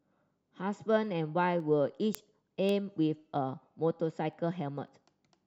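Speech, with word clock ticks running from 0.51 s to 5.43 s: roughly ten sharp clicks about every half second, uneven in strength. That's a receiver on its own clock, not locked to the source, slipping a single sample each time the clocks drift past each other, something like 40 ppm apart.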